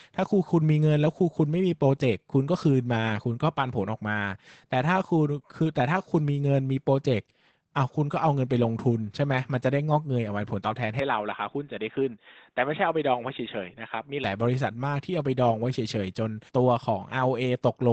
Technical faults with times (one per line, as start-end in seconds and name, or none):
0.00-17.93 Opus voice compression
10.99-14.24 input switched to a poorer device